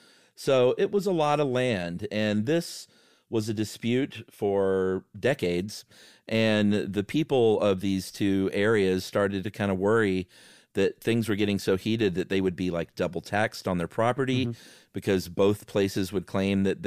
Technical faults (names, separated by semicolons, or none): none